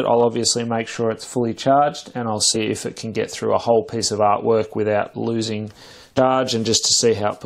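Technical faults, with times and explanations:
6.17 s, damaged data in a compressed stream: a brief blip where corrupted frame bytes confuse the decoder, which loses sync and hunts for the next valid frame header.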